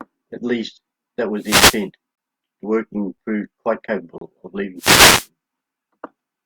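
At 1.38 to 1.85 s, just after "least that", a wireless microphone noise hit swishes in. The analogue FM radio link fades as reflections cancel. Receiver static rises and masks the speech briefly.

Gaps between stream segments follow, one second apart. At 2.15 s comes a hard-edged hole of about 23 ms. At 3.18 s, before "proved quite", a 6 ms gap ticks. At 4.18 s, after "proved quite", a 31 ms gap cuts in. Segment time stamps leave spaces filled with silence. No audio is lost.

At 4.77 to 5.28 s, a second noise hit brings another burst of static.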